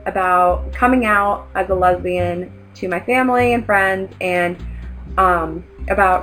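Imaging from linear upsampling runs throughout this audio. The sound points to material at about 11 kHz sample rate being raised to 48 kHz by joining neighbouring samples with straight lines, a weak interpolation filter. The top of the original band near 5.5 kHz is dulled, and a mirrored copy of the spectrum sits between 5.5 and 11 kHz at about 35 dB below the signal, adding a faint metallic shimmer to bright, high-frequency content.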